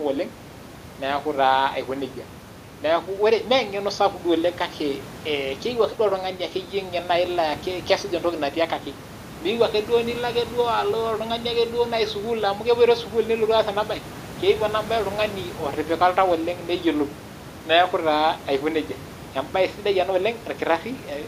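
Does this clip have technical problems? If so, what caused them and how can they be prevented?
No, there are no technical problems to point to in this speech clip, so there is nothing that needs preventing. What can be heard underneath is ordinary room noise from where the microphone was placed, sitting about 19 dB below the speech.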